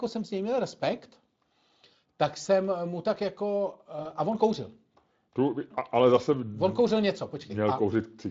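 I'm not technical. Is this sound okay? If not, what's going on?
No. At 2.41 s and 4.03 s there's VoIP packet loss concealed by the speech codec: lost data was guessed, so the voice briefly turns into a buzzy tone or noise that fades.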